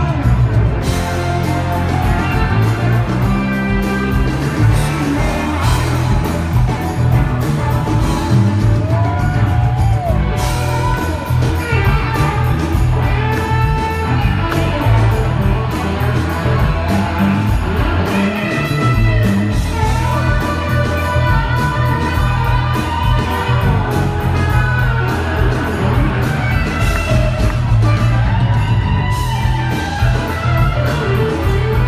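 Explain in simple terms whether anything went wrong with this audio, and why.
A nearby mobile phone on a 2G call was sending radio pulses about 217 times a second, and the recording circuit picked them up. That caused GSM phone buzz: a steady, harsh, raspy drone from 4.33 to 5.33 seconds, separate from the recorded sound.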